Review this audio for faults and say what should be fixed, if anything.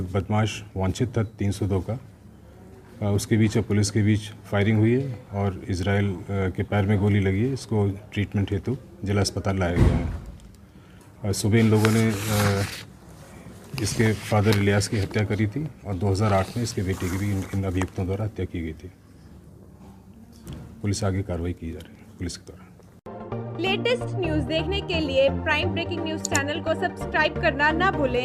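Nothing needs to be fixed, since the review turns up no faults in the audio.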